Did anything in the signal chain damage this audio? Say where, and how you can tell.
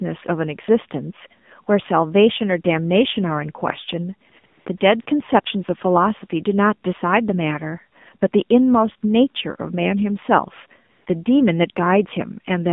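Yes. AMR narrowband mobile codec damage runs through the whole speech clip, from the codec stage. The band stops at about 150 Hz and 3.6 kHz, and plainly audible buzzy, synthetic coloration fits the 7.4 kbps mode, where a few pulses per subframe drive a vocal-tract model.

AMR comfort noise appears at 4.30–4.32, 4.40–4.44, 4.46–4.66, 4.78–4.80, 5.02–5.06 and 10.92–11.06 s, from call processing. The phone judged the talker silent and stopped sending speech frames, so smooth synthetic noise switches in briefly, replacing the real background.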